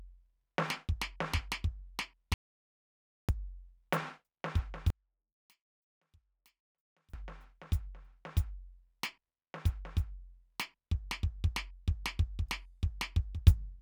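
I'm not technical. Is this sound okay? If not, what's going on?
No, there are two problems.

An audio dropout to silence runs from 2.34 to 3.29 seconds. The music stops dead for almost a second and then returns partway through, and the gap is completely silent, with not even faint background hiss. The likely cause is that the input was briefly lost, perhaps through a loose cable or a momentary mute, while the recorder kept writing pure silence. The music from that moment is gone.

One channel is inverted from 4.90 to 7.14 seconds. For just over two seconds the music nearly disappears, dropping to a faint trace before recovering. This is likely one stereo side flipped upside down relative to the other. When the two sides are combined, as they are on a single speaker, the parts they share cancel each other out, so only a faint remnant of what differs between them survives.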